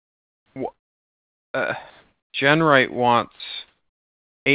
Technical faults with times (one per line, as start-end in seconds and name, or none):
0.00-0.56 comfort noise in place of the background
0.52-0.56 onset clipped by the voice detector
1.90-2.34 comfort noise in place of the background
2.32-2.34 onset clipped by the voice detector
3.36-3.40 sound dropped by the voice detector
3.68-4.46 comfort noise in place of the background